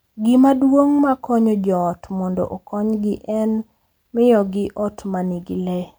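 Listening to the speech recording, nothing technical stood out as a problem.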